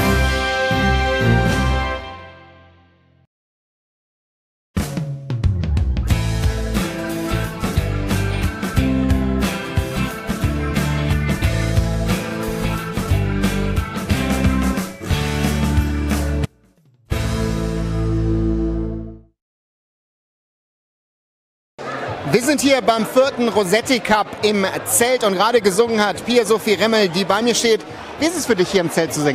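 At 16.45 s the sound cuts out abruptly, an audio dropout to a faint residue lasting 0.66 s, until 17.11 s. The gap is not silent. A faint leak of the sound remains, roughly 35 dB down. This likely means the signal was lost while the path stayed live.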